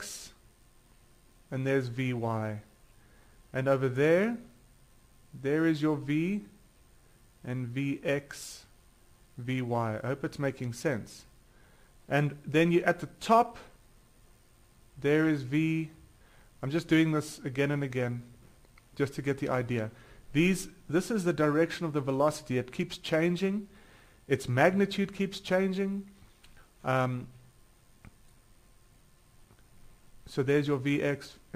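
Throughout, crude rate conversion repeats samples, fitting a 44.1 to 48 kHz change, adding a gritty inharmonic fizz about 30 dB down that shows as stray spectrogram lines.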